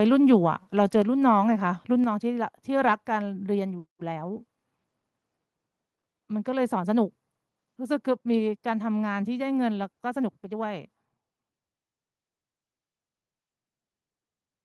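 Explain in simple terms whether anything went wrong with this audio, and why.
Around 0.33 to 0.35 s, the loudest moment of speech has a brief harsh crackle, likely microphone overload: the peaks were too loud and got flattened, unlike ordinary background crackle.

At 1.02 s and again at 2.04 s, everything drops in loudness in one sudden step, likely the microphone volume stepped down by the call software, not a gradual fade.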